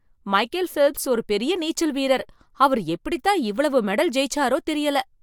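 No technical faults can be heard anywhere in the speech. Nothing breaks from the surrounding audio at any point, so there are no events to place in time.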